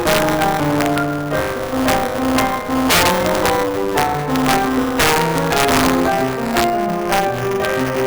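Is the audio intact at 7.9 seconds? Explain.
No. At 7.9 seconds the music carries two faults that run through the entire clip.

The first is integer overflow. The level is driven about 6 dB past the integer limit, and the gain is not limited, so the few peaks that exceed it (well under one percent of samples) wrap around to the opposite extreme. On loud moments this produces violent, sharp cracks. Clipping would flatten those peaks into a dull, fuzzy distortion. Here each overflowing peak jumps across the full range, so the cracks are harsher and more sudden.

The second is buffer tearing. The software writing the ring buffer and the hardware reading it have drifted so that they cross inside every period. In each buffer, roughly a tenth of the audio is stale material from around 20 ms earlier, with a hard join at both ends. This gives a steady robotic buzz at 200 Hz, which points to a buffer period of about 5 ms. 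Random dropouts would not sound like this. The buzz is regular, it is present only while the music is sounding, and it leaves no silent gaps.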